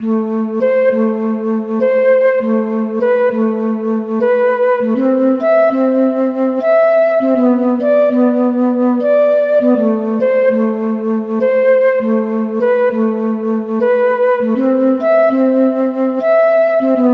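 No technical faults can be heard anywhere in this audio. There is nothing here that needs a timestamp or a fix.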